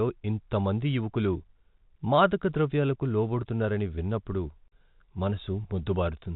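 Packet loss filled with silence at 4.68 to 4.72 s, just after "మాదకద్రవ్యాలకు లోబడుతున్నారని విన్నప్పుడు": a 40 ms hard-edged gap, consistent with two dropped 20 ms packets, where the speech stops abruptly within the telephone-band G.711 signal.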